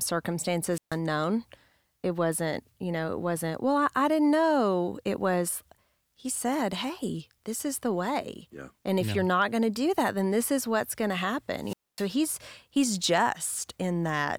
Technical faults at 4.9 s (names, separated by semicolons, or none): none